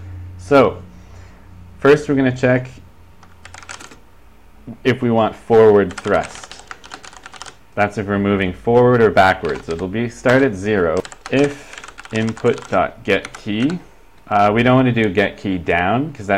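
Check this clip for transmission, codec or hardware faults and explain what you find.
Nothing wrong can be heard anywhere in it.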